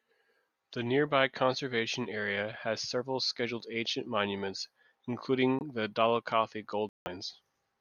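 A speech recording with two abrupt dropouts to silence, one of 0.04 s at 5.59 s and a longer one of 0.19 s at 6.89 s. Timing carries on unbroken, which points to corrupt frames being muted: the decoder rejected damaged compressed frames and the player substituted silence, one frame's worth in the first gap and several consecutive frames in the second.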